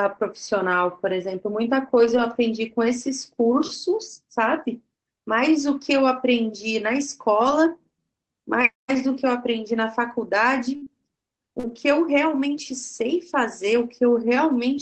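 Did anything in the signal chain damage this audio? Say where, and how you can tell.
Yes. At the network stage, from 1.97 to 2.19 s, there is a lost packet rebuilt from error correction. The sound turns briefly rougher and noisier but never drops out. Opus played a low-bitrate in-band copy carried by the following packets. About 120 ms was rebuilt, which fits several separate packets.

Between 7.39 and 12.63 s there are scattered short gaps, also a network fault. About seven brief ticks and smears are spread across the stretch, none longer than roughly 50 ms. Late or lost packets left small holes. The jitter buffer filled each by extending the previous sound.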